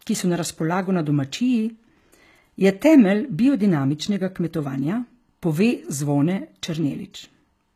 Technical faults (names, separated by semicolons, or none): HE-AAC compression